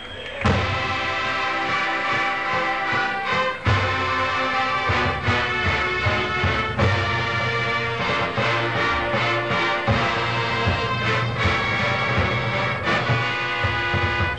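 From 8.07 to 8.15 s there is a short burst of DAB burbling, lasting under a tenth of a second. Bit errors have slipped past the error correction into the MP2 audio data, so corrupted samples put short blips of noise into individual sub-bands, and corrupted scale factors can send sub-bands briefly jumping in level, frame by frame. It is heard as a brief burbling over the audio, consistent with a residual bit error rate of about 0.07 percent.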